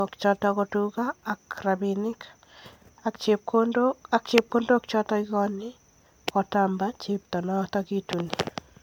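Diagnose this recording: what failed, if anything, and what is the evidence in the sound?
Codec stage: the speech sounds swirly, hollow and smeared throughout, with blurred attacks, well beyond what the top end reaching 20.1 kHz suggests. Likely generation loss from roughly seven MP3 passes.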